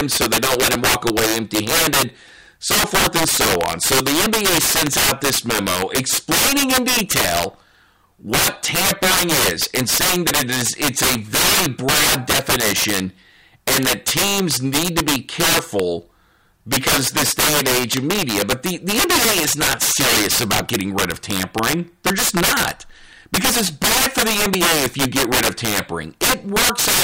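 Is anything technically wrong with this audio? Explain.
Yes. Throughout the speech there is integer overflow: the signal is driven about 17 dB too hot, and roughly 7 percent of samples exceed the integer limit and wrap to the opposite sign. The result is violent cracks on loud syllables, harsher and more abrupt than the flattened buzz of clipping.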